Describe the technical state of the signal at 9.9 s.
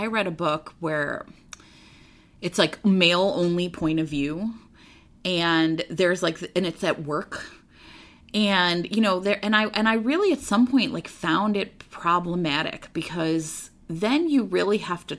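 At 9.9 s the speech signal is intact, with no audible fault at that moment.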